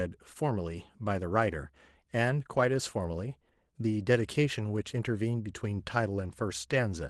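No technical faults are audible anywhere in this recording.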